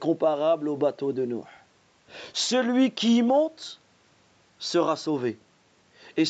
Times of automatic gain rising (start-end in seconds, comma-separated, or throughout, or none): none